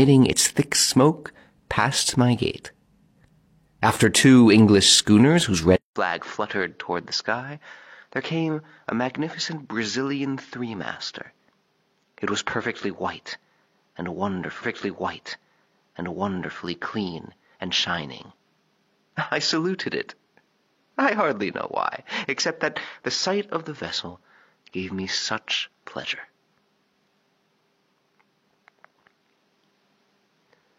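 At 5.76 s the audio goes silent for about 200 ms and then comes back duller and boxier. Nothing remains above 6.9 kHz, the level sits about 10 dB lower, and new background noise appears roughly 40 dB under the signal. This narrower, quieter character lasts to the end, which points to the input likely having switched to a poorer device, such as a second microphone or a headset in its call profile, with its own limited bandwidth, gain and noise. From 14.58 s to 16.58 s a stretch of just under 2.0 s plays a second time, entered with a small blip where playback jumps back. This is a stream segment repeated: the player fetched or queued the same segment twice, which adds about 2.0 s to the running time.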